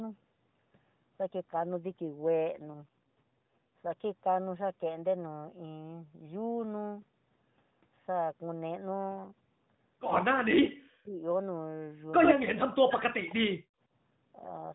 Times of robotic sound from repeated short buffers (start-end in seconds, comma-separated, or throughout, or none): none